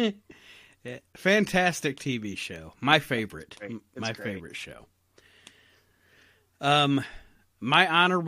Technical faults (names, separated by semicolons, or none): none